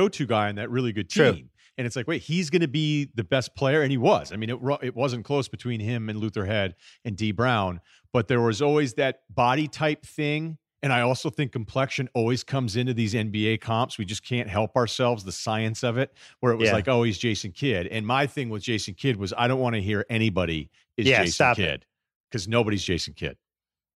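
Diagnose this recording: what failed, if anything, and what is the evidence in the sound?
No fault detected.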